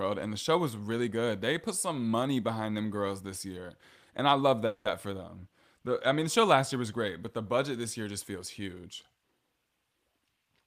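At 4.66 s, between "I love" and "for them", a call audio freeze occurs. The likely cause is packets delayed in transit long enough to drain the jitter buffer, so the receiver stretched the last sound to cover the wait. What you hear is a short fading buzz or hiss lasting about 190 ms, to 4.86 s. Then the speech resumes exactly where it stopped. Nothing is lost, but the rest of the call now runs about 190 ms later.

From 10.05 s to 10.62 s there is a jitter buffer speed-up. The buffer had built up more audio than its target, so the receiver cut delay by removing many short pitch-period slices one after another, roughly 70 ms in total. The speech plays at about 113% of normal speed while keeping its pitch. The result is a rushed delivery in those final half-second syllables.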